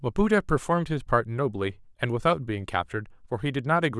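No faults turn up anywhere in this speech recording.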